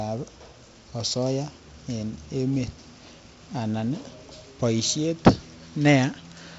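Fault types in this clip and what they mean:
No faults are heard anywhere in this speech recording.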